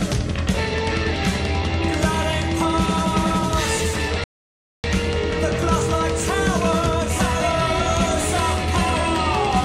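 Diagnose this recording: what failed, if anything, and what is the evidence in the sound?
The failure is at the playback stage: a rebuffering stall. At 4.24 s the sound drops to silence, and it resumes at 4.84 s exactly where it broke off, so nothing is skipped but about 0.6 s is added. The player drained its download buffer and waited for more data before continuing. On a waveform this shows as a flat line between the two times; on a spectrogram, a clean, full-height blank band with matching content on either side.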